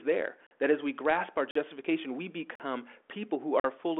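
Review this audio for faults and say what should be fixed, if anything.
Gap between chunks at 0.47–0.51 s (just before "that as we grasp"), 1.51–1.55 s (right after "as we grasp our"), 2.55–2.60 s and 3.60–3.64 s. Each 44 ms hole recurs every 1.0 s, so the audio is being delivered in one-second chunks with silence left at each join. The narrowband telephone sound, with nothing above about 3.8 kHz, is the same on both sides of these holes. To prevent it, strip codec padding and schedule each chunk to start exactly where the previous one ends.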